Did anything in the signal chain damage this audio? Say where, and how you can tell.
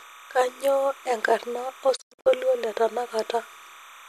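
Yes, two places. The first is in the analogue wiring. Under the whole clip there's a steady chirping warble flipping between two tones near 1 and 2 kHz, sitting roughly 25 dB below the speech. That's timecode bleed: linear timecode running at 30 frames per second on an adjacent track or cable has coupled into the audio line. Its square-wave switching between the two pitches is what gives it that chattery texture.

The second is at the reception end, a digital broadcast dropout between 1.95 and 2.28 s. The speech doesn't go in one clean gap. It breaks into several short holes spread over about 290 ms, adding up to 216 ms of lost audio, with the longest silence 96 ms. Each hole fades out and back in over about 20 ms, which is the receiver muting on bad frames rather than a hard cut. The pattern fits roughly nine frames failing their checks, and whatever was sent in those holes is gone.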